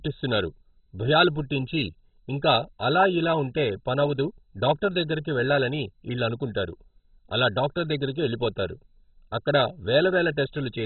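From start to finish the speech sounds dull and muffled, with nothing audible above about 4.1 kHz, and a gurgling, grainy distortion that makes the remaining frequencies seem to bubble and flicker. The likely cause is heavy MP2 compression. At a bit budget that fits a rate near 16 kbps, the encoder runs out of bits, so it drops whole upper sub-bands entirely. The bands it keeps are quantised so coarsely that they turn rough and unstable.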